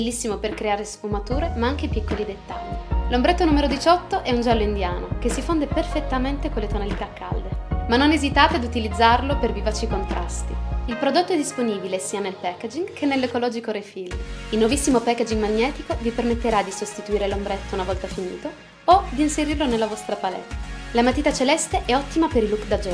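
No technical faults can be heard in this audio.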